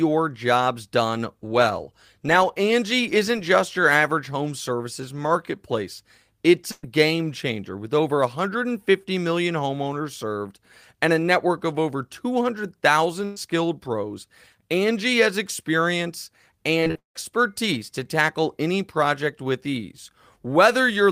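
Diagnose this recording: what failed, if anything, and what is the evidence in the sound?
The network path failed, with a burst of packet loss twice. At 6.71 to 6.85 s and again at 13.25 to 13.38 s, the speech stops moving and holds. A voiced sound turns into a steady buzz, or a fading hiss, for about 115 ms. Then it jumps ahead. About 120 ms of speech is missing each time. The receiver bridged each hole by extending the last sound and turning it down.

Repeated packet loss, the robotic sound, hits the same network stage from 16.80 to 17.19 s. The speech turns choppy. Six separate holes fall inside those 0.39 s. The longest lasts about 179 ms. Patched audio fills about 69 percent of the stretch, and about 280 ms of real speech never arrives. Each hole is covered by continuing the last sound, and the next loss follows before the speech recovers.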